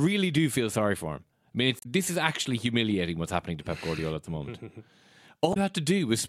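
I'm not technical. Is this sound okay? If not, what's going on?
No. Twice in this speech clip there is a short glitch lasting well under a tenth of a second: from 1.79 to 1.86 s, just before "this is actually humiliating", and again from 5.50 to 5.57 s. Both come from damaged data in a compressed stream. A small stretch of the file was corrupted, so the player couldn't read it properly and briefly lost track until it found its place again.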